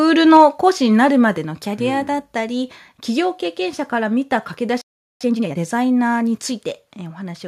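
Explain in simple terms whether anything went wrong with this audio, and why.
A few things go wrong in this speech clip. Right at the start, from about 0.34 to 0.43 s, the loudest moment gets a harsh, crackly edge. That's microphone overload: the input was most likely set too high, so the tops of the peaks got chopped off, a small share of the sound at that spot.

You'll also hear the microphone volume stepped down, once at 0.37 s and again at 1.38 s. The level suddenly drops a notch each time, the second drop bigger than the first. The call software most likely noticed the mic running hot and turned its input down in quick jumps.

Later there's a playback stall: the sound just stops mid-flow from about 4.81 to 5.21 s, a gap of roughly 0.39 s. The likely cause is the player running out of data or getting held up, so it went quiet until it could continue.

Straight after that, from 5.21 to 5.59 s, comes a time-compressed catch-up. 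The player clears its backlog by snipping out tiny bits and blending the rest together, so the sound rushes by at double speed. The pitch stays normal.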